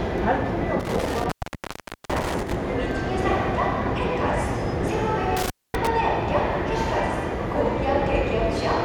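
Intermittent contact at 0.80 to 2.55 s and 5.37 to 5.87 s. A loose connection opens, dropping the sound for 0.8 s, then 0.24 s, with crackle at each edge.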